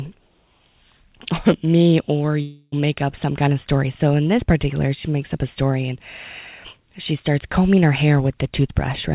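From 2.42 to 2.74 s, a fading buzz stretches the last sound for about 0.3 s before a brief silence. This is likely a long network dropout, with the missing audio never returning.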